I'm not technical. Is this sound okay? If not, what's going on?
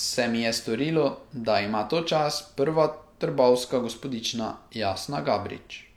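Yes, no faults here.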